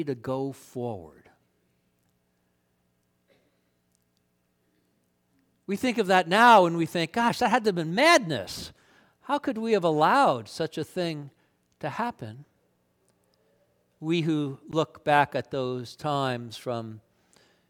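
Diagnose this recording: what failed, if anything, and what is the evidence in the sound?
The playback stage most likely suffered a Bluetooth stall: radio interference held back packets on the wireless link, the headphones' buffer emptied before the retransmissions arrived, and output simply halted. In the speech at 14.71 s the sound drops to dead silence for about 14 ms, then carries on. The gap is abrupt rather than faded, which points to a brief buffer underrun at the receiving end rather than a fault in the recording itself.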